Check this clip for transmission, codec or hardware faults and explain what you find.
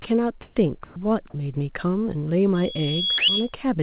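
The clip shows three kinds of fault, all heard through audio with nothing above 4 kHz, which fits a G.711 mu-law call path.

Sound dropped by the voice detector at 0.02 s, 0.84 to 0.96 s, and 3.18 to 3.28 s. The sender's voice detector likely misjudged the speech as background and stopped transmitting, so the receiver filled in comfort noise. About 20 ms, 60 ms and 100 ms of speech give way to flat noise before the sound returns.

Comfort noise in place of the background from 0.42 to 0.56 s. During this pause the sender likely switched to discontinuous transmission, and the receiver generated synthetic noise. The natural background is replaced by a smooth, featureless hiss that shifts in level by about 10 dB.

Loudspeaker feedback squeal from 2.54 to 3.55 s. A microphone is picking up the loudspeaker it feeds, and at 3.3 kHz the loop gain exceeds one, so that tone reinforces itself. It swells over about half a second into a piercing whistle a little louder than the speech.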